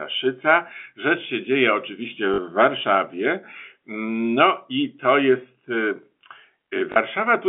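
Telephone-band speech carries packet loss with the last packet repeated at 2.34–2.38 s and 6.92–6.96 s. Each 40 ms gap, which fits two lost 20 ms packets, is filled by a copy of the preceding packet, producing a brief stutter. On the waveform the repeated block stands out as an identical copy. On a spectrogram the G.711 coding shows a band ending below 4 kHz, and the repeats show 50 Hz striping.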